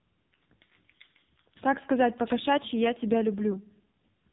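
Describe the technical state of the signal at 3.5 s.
From 3.52 to 3.55 s there are lost AMR speech frames: a frame failed its checksum, so the decoder repeated the previous pitch and vocal-tract parameters at reduced gain. This gives a brief dip or warble consistent with one missing 20 ms frame.

Underneath, the AMR narrowband mobile codec is active: nothing above 4 kHz, heavy buzzy, synthetic coloration typical of a low mode around 5.9 kbps.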